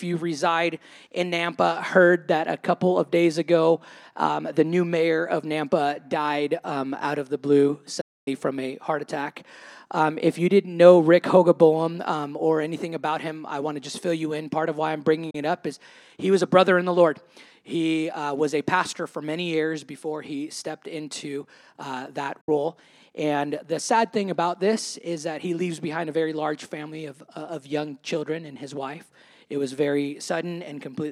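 A digital broadcast dropout mutes the sound at 8.01 s for 0.26 s, again at 15.30 s for 32 ms, and at 22.41 s for 64 ms. Each time the receiver stopped getting usable frames and went silent behind an 8 ms fade, and the programme then resumed further on with the gap's material gone. The hole lengths are whole multiples of 32 ms, which points to frame-sized losses. The silence is not papered over with repeated or smeared sound, as concealment would be.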